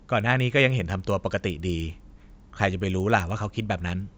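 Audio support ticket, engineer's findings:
Resampler restarted on every block, throughout. Regular ticks at 10 per second under the speech, spacing consistent with 100 ms processing blocks. Component: sample-rate converter, pointing to a 16 kHz to 48 kHz conversion. Mechanism: each block converted in isolation, filter state discarded, so each block edge is interpolated against silence or the wrong end of the block instead of true neighbouring samples. The small edge error recurs at block rate and rides on the signal.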